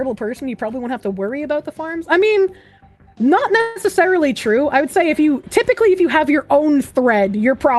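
At about 3.61 s the audio stalls until roughly 3.83 s. For about 144 ms the last bit of sound is stretched into a fading buzzy tail, then everything picks up exactly where it left off, with nothing skipped. That's a call audio freeze, most likely packets held up in transit so the jitter buffer ran dry and the receiver had to improvise a fill. Everything after it lands about 144 ms later. Across the clip the top end rolls off around 12 kHz, which fits an Opus call path.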